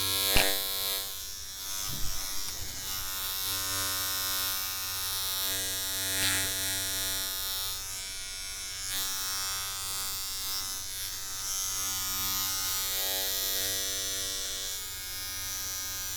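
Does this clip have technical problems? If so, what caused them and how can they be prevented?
No, there are no technical problems in this audio.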